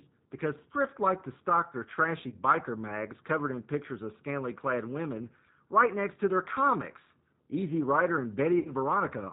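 Throughout, the speech sounds slightly rough, synthetic and narrowband, with nothing above 4 kHz. This is G.729 codec damage: the low-rate coding, pointing to an 8 kbit/s stream, rebuilds speech from a vocal tract filter, a pitch predictor and a few pulses per frame.

From 2.29 to 2.38 s, between "to stock their trashy" and "mags covered in pictures", the sound smears into a brief buzzy tone or coloured noise that fades, and from 8.59 to 8.72 s it happens again, longer. This is VoIP packet loss concealed by the speech codec. About 30 ms and then 60 ms of audio went missing, fitting one and then two lost packets. The decoder extended its last pitch and filter at falling gain, and the sound stays weak until it recovers.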